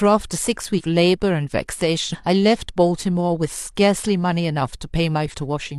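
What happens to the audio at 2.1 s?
Several whole frames of the compressed stream never reached playback, either missing from the file or rejected by the decoder as damaged. This is compressed frames skipped, between 2.09 and 2.16 s. Around 300 ms of speech simply vanishes, a jump that fits roughly seven frames of 46.4 ms each. At the join, the speech resumes abruptly further along.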